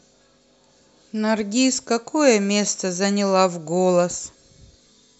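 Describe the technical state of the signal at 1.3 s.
At 1.3 s the speech signal is intact, with no audible fault at that moment.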